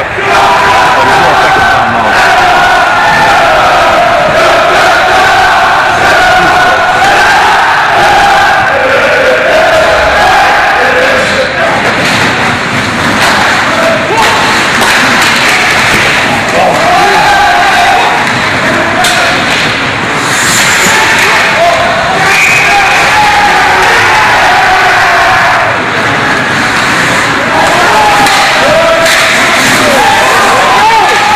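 From start to finish the audio shows hard clipping. The signal is driven about 18 dB beyond what a stage in the chain can pass, so every peak is sliced flat at the ceiling, and nearly a third of all samples sit at that limit. Those squared-off tops generate strong high-order harmonics, which is why the sound has a constant harsh, buzzing fuzz on every loud moment rather than occasional crackle on isolated peaks.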